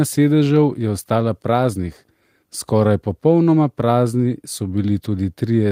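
No faults turn up anywhere in this bit of speech, so there's nothing here to pick apart.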